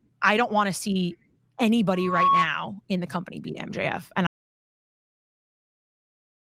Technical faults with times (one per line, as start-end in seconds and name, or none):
1.94-2.50 loudspeaker feedback squeal
4.27-6.41 audio dropout to silence